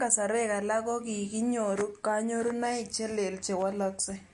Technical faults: MP3 compression

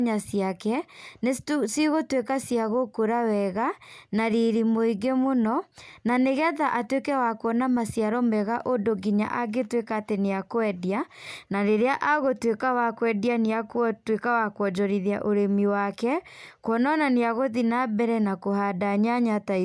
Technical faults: none

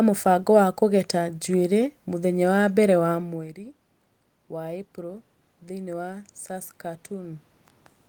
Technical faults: automatic gain rising

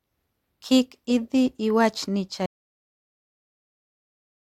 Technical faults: audio dropout to silence

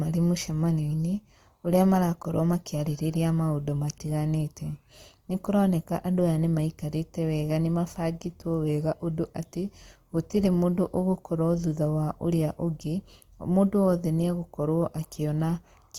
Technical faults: Opus compression

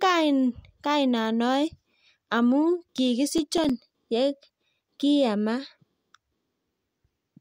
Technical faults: processor overload crackle

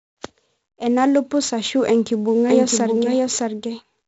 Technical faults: 4-bit ADPCM compression

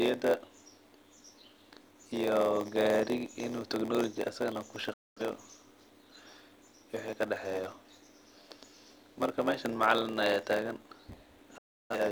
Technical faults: block size mismatch (padded); digital broadcast dropout

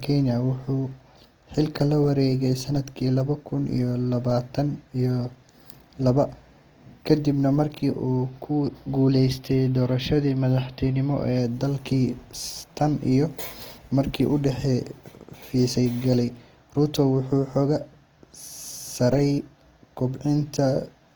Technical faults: Opus compression

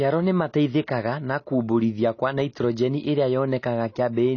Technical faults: AAC compression

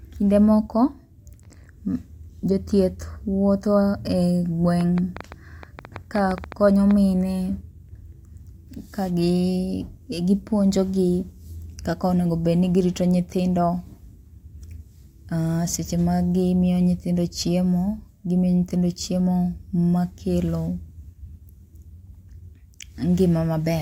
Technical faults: train of clicks

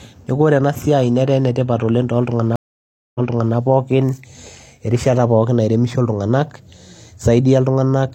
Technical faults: stream reconnect

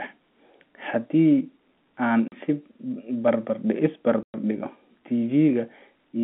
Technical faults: packet loss filled with silence

